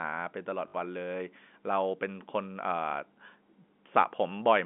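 Packet loss with last packet repeated occurs from 0.68 to 0.74 s, in the narrow telephone band. About 60 ms of audio went missing, which fits three lost 20 ms packets. The receiver replayed the last good one to fill the gap, so the run buzzes briefly at about 50 Hz, a short robotic stutter.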